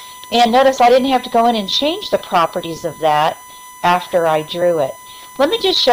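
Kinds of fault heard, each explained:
USB whine: a steady 1 kHz tone runs through the whole clip, sitting about 25 dB below the signal. It comes from current drawn in 1 ms bus frames leaking into the audio through power or ground. On a spectrogram it shows as a thin unbroken horizontal line at 1 kHz.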